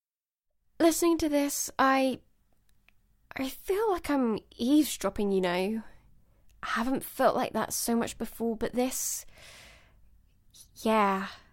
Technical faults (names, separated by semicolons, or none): none